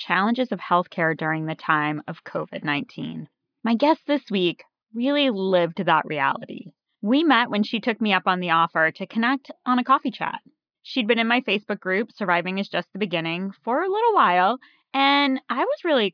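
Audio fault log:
Nothing to log here; this speech clip has no faults to report at any point.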